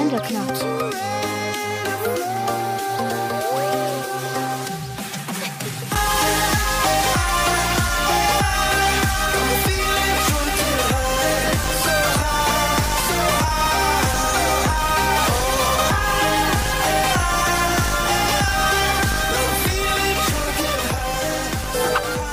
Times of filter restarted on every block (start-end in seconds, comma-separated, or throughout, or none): 11.34-22.33